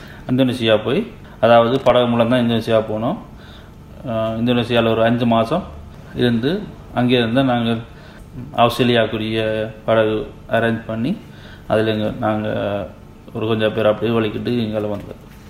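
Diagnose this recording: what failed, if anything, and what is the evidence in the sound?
A worn or dirty contact in the analogue wiring caused loose connector crackle: irregular scratchy bursts from 1.68 to 1.90 s as the connection chopped the signal.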